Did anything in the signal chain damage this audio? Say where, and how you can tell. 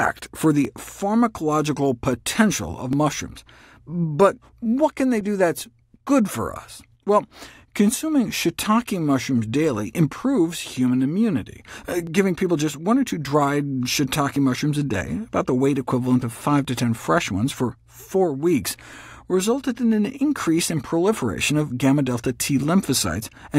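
Yes, at the buffer between two devices. From about 0.65 s to 23.51 s there's a click roughly every 2.28 s, about ten in all. It's likely clock drift buffer slips: mismatched clocks, off by a few hundred ppm, force the buffer to drop or repeat a few dozen samples each time.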